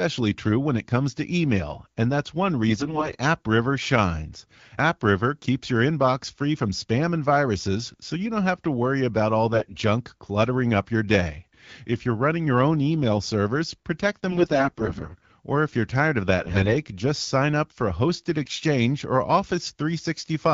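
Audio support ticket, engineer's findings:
AMR bit errors on a weak radio link: the less-protected bits of the AMR-WB frames arrive flipped at a rate of several percent, and the core-bit checksum still passes, so the decoder uses the corrupted data. Misplaced excitation pulses and wrong fine pitch, gain and spectral values make the speech hoarse, scratchy and gargly, with pitch and level roughly held, on an otherwise clean 12.65 kbit/s wideband path. Bursts at 2.68–3.16 s; 9.53–9.74 s, between "to worry about all" and "junk cluttering up your"; 14.30–15.27 s, after "own email servers protect"; 16.38–16.76 s, between "if you're tired of" and "just sign up for"; 18.42–18.60 s.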